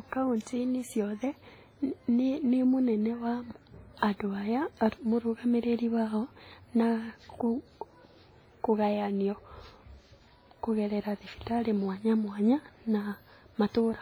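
From start to finish the speech carries heavy transform-codec damage, most likely WMA compression at a low bitrate, in the region the sound suggests of about 24 kbps. Long coding blocks smear quantisation noise over tens of milliseconds, so the speech rings and sounds washy, with a hiss that swells and fades with the signal. On a spectrogram, weak upper components drop out in blocky patches and leave holes, while the waveform shows noise smearing before sharp onsets.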